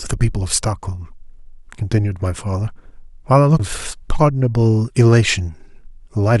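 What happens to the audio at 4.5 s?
Nothing goes wrong at 4.5 s; the speech carries on intact through that moment, with no dropout, click or distortion.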